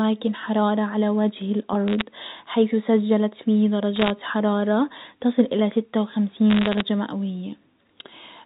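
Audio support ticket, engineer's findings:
Bit errors on a digital phone line: three short bursts of sharp ticks and crackle over the speech, at 1.88 to 2.02 s, 3.96 to 4.10 s, and 6.50 to 6.81 s. The last burst is the longest. Flipped bits on the G.711 A-law path are corrupting single samples. Sign and high-bit hits give the loudest clicks. The error rate sounds like under one percent. The speech between ticks stays intact, and the 4 kHz telephone band sounds clean.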